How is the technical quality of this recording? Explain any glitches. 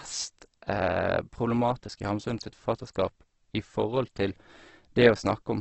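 The technical quality is poor. Heavy compression damage runs through the whole clip. It is likely Opus compression at a very low rate, which fits about 12 kbps. Nothing is heard above 8.1 kHz. The encoder keeps each band's energy but fills starved bands with folded or noisy content. So the speech sounds grainy, rough and hissy, not swirly.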